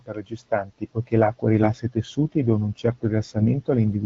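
At 1.62 to 1.68 s, between "per gestanti poichè l'acqua" and "i tessuti e dona", and again at 3.36 to 3.44 s, the speech briefly turns hoarse and gargly. These are AMR bit errors: a few percent of the weakly protected bits in the wideband AMR stream were corrupted, so the excitation pulses and fine gain and spectral values decode wrongly. Unlike lost frames, which leave gaps or smeared repeats, pitch and loudness carry on and only the texture scrapes.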